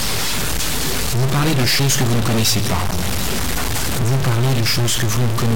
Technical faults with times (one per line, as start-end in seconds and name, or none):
0.00-5.55 stuck bit